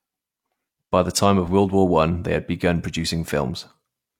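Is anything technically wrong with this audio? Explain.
No, nothing technically wrong turns up anywhere in this speech recording.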